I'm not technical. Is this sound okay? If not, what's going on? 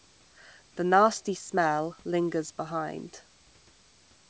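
Yes, nothing is wrong with this recording.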